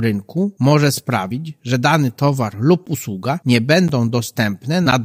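Periodic USB or driver dropouts run from 2.86 s to 4.92 s, about three evenly spaced gaps every 1.02 s. Each time something stalls the bus or audio driver, roughly 10 ms of signal is replaced with silence, heard as a regular tick.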